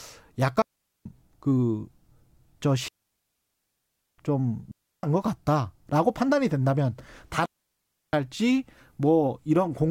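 Digital wireless dropouts mute the speech at 0.62–1.06 s, 2.88–4.18 s, 4.71–5.03 s and 7.46–8.13 s, as the receiver loses data and briefly fades out. Each shows as a clean, near-silent gap in the waveform and spectrogram, with no noise burst on either side.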